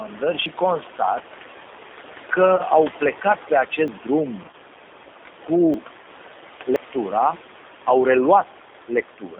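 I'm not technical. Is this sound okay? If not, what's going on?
No, this speech recording has several problems.

Throughout, the background noise seems to drop away in the pauses and come back underneath the talking, and what remains of it can sound wobbly or fluttery. These are noise suppressor artifacts. A cleanup stage keeps guessing which parts of the sound are steady hiss and turns those down moment by moment, so the noise level keeps shifting with the speech instead of staying put. The room noise underneath is ordinary background sound from where it was recorded.

The whole clip also has the closed-in, slightly rough and artificial quality of a phone call, and that damage is plainly audible. This comes from the G.729 codec, a compression method used for internet calls. It throws away everything outside a narrow telephone-style range and rebuilds the voice from a simplified model of how speech is made, rather than keeping the original sound.

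At about 0.46, 3.88, 5.74 and 6.76 seconds, the sound jumps forward abruptly, as if a small piece were snipped out. The one at 3.88 s comes just after "au plecat pe". These skips are likely a dropped buffer (overrun). The computer didn't collect a batch of sound in time, so it was overwritten and the two sides were spliced together. Roughly a fiftieth of a second goes missing at 3.88 seconds, and about a fourteenth of a second at each of the others.

From 2.56 to 2.62 seconds, just before "au plecat pe", and again from 4.43 to 4.54 seconds, the voice briefly turns smeared, buzzy or fading. This is VoIP packet loss concealed by the speech codec. Small pieces of the call never arrived, and the receiver filled the gaps by stretching out the last sound it had. In the second spot, the losses are scattered in short bursts across that stretch.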